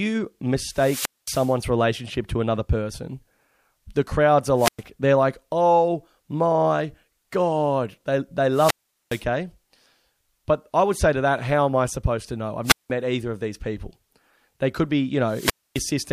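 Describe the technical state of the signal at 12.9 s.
At 12.9 s the speech is just coming back from a wireless microphone squelch dropout that runs from 12.64 to 12.90 s. The FM link fades, hiss swells briefly, then the receiver's squelch mutes everything for about 182 ms before the signal recovers.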